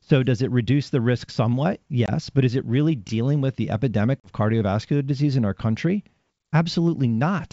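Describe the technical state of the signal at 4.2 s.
At 4.2 s the call suffers packet loss on an ADPCM call. A few packets, about 40 ms of audio, fail to arrive. The gap is filled with silence, and the decoder's adaptive predictor and step size lose track of the sender's. Between 4.20 and 4.29 s, after "dealing with the epidemic", the speech drops into a hard-edged hole. It then resumes at "cardiovascular disease in our" with brief, slight distortion until the G.722 decoder resynchronises.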